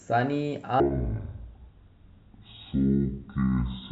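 A speech recording whose sound turns deep and slow from 0.8 s to the end, dropping about ten semitones in pitch while everything stretches out. This is a section at the wrong speed, playing at 0.504 times its recorded rate, likely from being fitted to the wrong clock.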